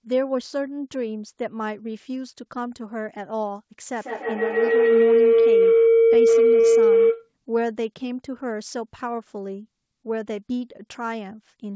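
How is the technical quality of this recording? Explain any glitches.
Two faults stand out: a feedback howl through the middle of the clip, and a brief stall from a late packet inside it. The speech carries no content above 8 kHz, which fits a wideband call path.

Feedback howl, 3.96 to 7.32 s: Two devices in the same room joined the call, so sound from one loudspeaker reached the other microphone and cycled back louder on every trip. The repeats narrow into a tone around 500 Hz, with the loop coming round roughly every 150 ms and peaking about 10 dB above the speech.

Short stall from a late packet, 6.61 to 6.66 s: A packet arrived late, the jitter buffer ran dry, and the receiver stretched the last sound for 26 ms until the data caught up. Nothing is lost, but the sound hangs slightly too long, adding a small delay.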